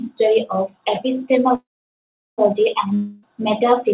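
From 1.55 to 2.41 s there is a call audio freeze: the last sound stretches into a fading buzz, then about 0.74 s of silence, before the speech resumes exactly where it paused. Nothing is lost; the delay grows by 0.83 s, likely from packets held up until the jitter buffer ran dry.

From 2.95 to 3.25 s comes a long network dropout. The final sound is drawn out into a decaying hiss for about 0.28 s, and when the speech returns, roughly 0.27 s of it is gone. Delivery likely just stopped, and the narrowband sound, with nothing above 4 kHz, fits G.711 mu-law at 64 kbps.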